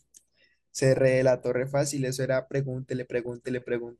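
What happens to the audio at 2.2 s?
At 2.2 s the speech sounds dull and muffled, with a gurgling, granular roughness in the remaining detail, and this runs through the whole clip rather than starting there. It is likely MP2 compression: the encoder splits the signal into 32 sub-bands and, short of bits at a rate that fits around 80 kbps, switches upper bands off and quantises the rest coarsely, so bands flicker in and out and the high end goes missing.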